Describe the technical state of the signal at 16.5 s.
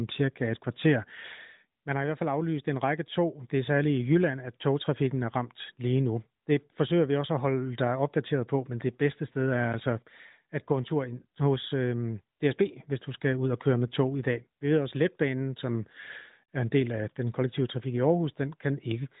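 A block of digital silence at 16.45–16.48 s, between "ved også letbanen som" and "er en del af". For 32 ms the sound cuts out with no fade, a pattern that points to an output buffer not filled in time. It is heard as a short hole.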